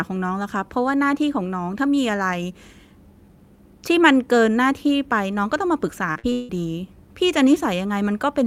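Speech, with a burst of repeated packet loss (robotic sound) from 6.11 to 6.51 s: four gaps in quick succession, the longest 157 ms, each patched by stretching the previous sound, so about two-thirds of that stretch comes out choppy.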